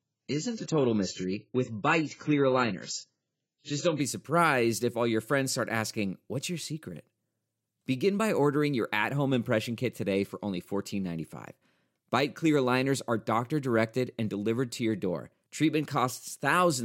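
From the start to 4.0 s, the speech is dull. Nothing is heard above about 7.6 kHz, and codec artefacts are strong. This is an adaptive stream starting at a low bitrate. The player chose a small version of the stream to begin fast, which fits AAC at around 16 kbit/s. Once it had measured the connection, it stepped up to a richer version, likely near 96 kbit/s. At 4.0 s, just before "surprised if all your", the treble returns suddenly, with no gap.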